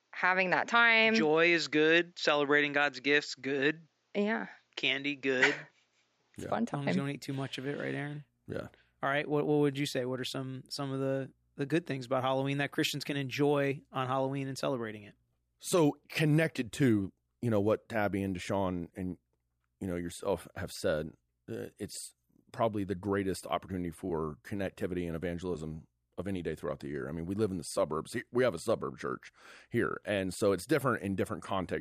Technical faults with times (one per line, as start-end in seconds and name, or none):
0.00-6.36 input switched to a poorer device